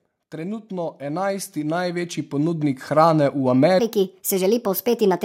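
From 0.31 s to 3.19 s, automatic gain rising lifts the level by about 12 dB as the gain control reacts to a quiet input. Speech and background noise swell together over nearly three seconds, unlike a fade-in, which starts from silence, or a speaker moving closer, which would raise the voice but not the room noise.

From 3.80 s to the end, a section at the wrong speed plays 1.38 times too fast, so the speech turns hurried and rises about five semitones. Because pitch and tempo shift together at once, this is not pitch correction or time-stretching, and is likely an editing or playback clock mismatch.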